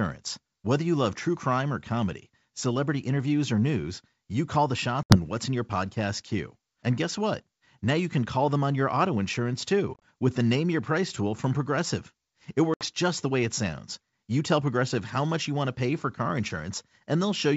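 Packet loss on an ADPCM call drops about 70 ms of audio at 5.03 s, after "news you call the". Scattered gaps totalling about 60 ms over 80 ms, the longest 30 ms, follow at 9.94 s, after "on your auto insurance". Another 70 ms goes at 12.74 s, before "just the way it". Each fits several lost packets replaced by silence, leaving the decoder's predictor and step size out of step with the sender's. The sound resumes slightly distorted and settles within some tens of milliseconds. On a spectrogram these are hard-edged blank columns.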